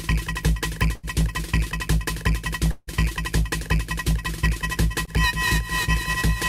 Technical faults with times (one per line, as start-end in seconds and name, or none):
0.95-1.05 burst of packet loss
2.71-2.89 long network dropout
5.05-5.09 short concealed packet loss